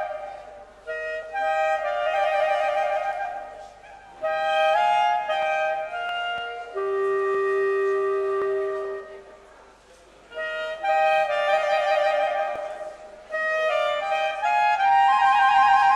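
Three brief forward jumps in the sound, each with no gap of silence, land at 6.09 s, 8.42 s and 12.56 s. The first and last skip roughly 10 ms of audio, the middle one only a few milliseconds. This is likely a dropped buffer (overrun): the recording side failed to collect its samples before the hardware overwrote them, so a short piece vanished and the audio on either side was joined directly.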